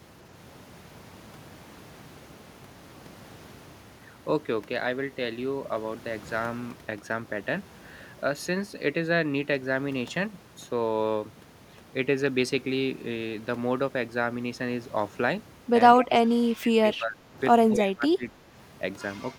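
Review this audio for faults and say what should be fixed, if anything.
Two stretches of the speech drop out in pieces: 15.99 to 17.38 s, sinking as much as about 25 dB for roughly a second in total, and 17.71 to 18.54 s, down about 20 dB for around 0.7 s. That pattern points to speech suppressed in double talk. The echo canceller likely couldn't tell the near talker from loudspeaker echo while both sides were talking, so it ducked everything. To prevent this, tune the canceller's double-talk detection and suppression limits so it holds back less when both ends talk at once.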